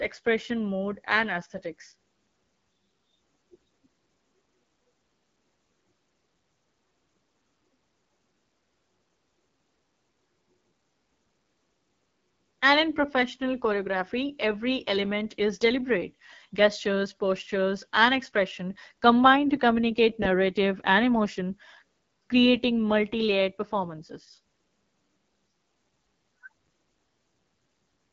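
From start to finish the speech carries AMR wideband (HD Voice) codec coding, with a roughness and raspy buzz that fits the 8.85 kbit/s mode. The pulse-excited vocal tract model is starved of bits, so damage is plainly audible, and nothing is present above 7.5 kHz.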